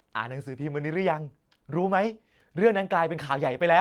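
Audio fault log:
Listening through the speech, nothing stood out as a fault at any point.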